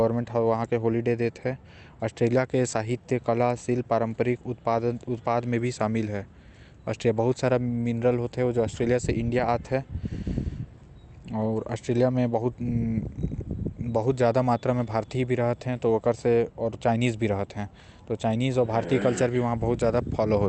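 No technical faults are audible.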